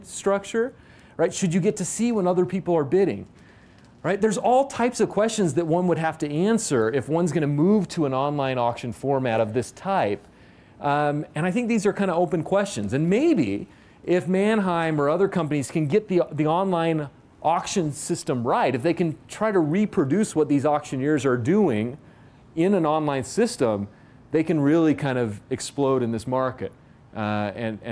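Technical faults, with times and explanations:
No technical faults detected anywhere in the clip.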